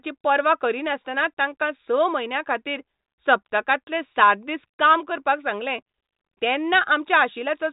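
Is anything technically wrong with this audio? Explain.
No, nothing is technically wrong with this speech.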